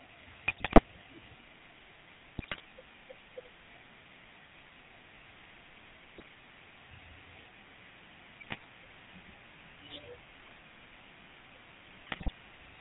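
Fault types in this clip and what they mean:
GSM full-rate codec: the whole recording carries this 13 kbps vocal-tract coding, with a buzzy, gravelly speech texture; spectrograms show nothing above 4 kHz.
GSM bit errors: corrupted decoder parameters cause squawks and gargling bursts at 0.48, 2.38, 6.03, 8.40, 10.40 and 12.06 s, visible as sudden level spikes and smeared spectra.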